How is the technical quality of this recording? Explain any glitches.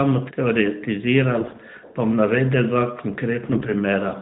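The speech goes through a narrowband mobile codec, consistent with AMR-NB at 12.2 kbps, so nothing above 4 kHz is present. There are two bursts of AMR bit errors, from 1.40 to 1.60 s and from 3.42 to 3.72 s, spanning about ten and fourteen 20 ms frames. Bits in the weakly protected parts of each frame arrived flipped, at roughly 5 to 7 percent. Pulse positions and fine pitch, gain and spectrum values decode wrongly. The speech keeps its rough pitch and level but turns hoarse, scratchy and gargly.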